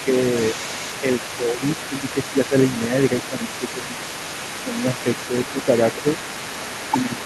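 From the start of the speech to its end, a second voice sits underneath the talker at about 15 dB lower. This is the other side's voice leaking through, likely because the device plays the far end on a loudspeaker and the echo canceller is not removing all of that signal from the microphone, so a residue of it is transmitted along with the near-end speech.

Against that background, the talker's level dips briefly at 1.9 to 2.15 s, 2.33 to 2.53 s, 3.3 to 3.89 s and 7.04 to 7.11 s. Each drop is about 5 dB, lasting only a fraction of each of the first three spans, and the longest is in the 3.3 to 3.89 s window. This is speech suppressed in double talk: with both sides active, the canceller likely cannot separate the near voice from the echo and attenuates both, so the talker audibly ducks.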